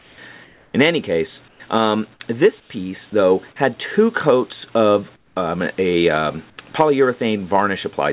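In the quiet stretches at 0.0–0.18, 0.44–0.74, 1.48–1.6, 2.6–2.7, 5.16–5.36 and 6.5–6.58 s, comfort noise appears in place of the background. The real background, already about 28 to 34 dB below the loudest sound, gives way to a flat, featureless hiss that drops by about 6 to 7 dB, or about 11 dB at 5.16 s. This is likely discontinuous transmission: the sender stops sending during pauses and the receiver fills them with shaped synthetic noise.

At 3.1 s, sound dropped by the voice detector cuts a sliver of about 10 ms of sound and replaces it with steady noise for about 20 ms. The likely cause is the detector classing that sound as background and halting transmission briefly. Throughout the clip, nothing is present above 4 kHz, which fits the narrowband G.711 codec of the call path.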